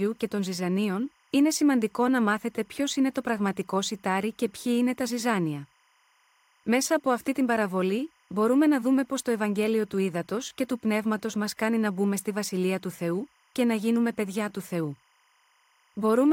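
Speech with timecode bleed throughout. A faint chirping warble sits behind the talking, about 40 dB down. It flips between roughly 1 kHz and 2 kHz. That is linear timecode, running at 25 frames per second, leaking in from a neighbouring track or cable.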